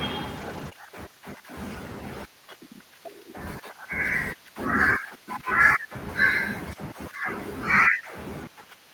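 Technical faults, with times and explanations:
0.37 to 0.67 s, lost packet rebuilt from error correction: lost packets were replaced by their low-bitrate copies carried in the next packets, so about 160 ms of speech plays rougher and noisier, without a gap.
0.69 to 0.73 s, short concealed packet loss: about 20 ms arrived too late and the decoder extended the preceding sound, leaving a brief smear before blending back.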